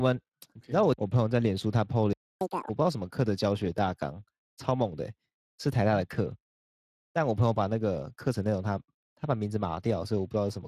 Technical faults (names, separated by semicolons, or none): Speex codec; playback stall; catch-up at higher speed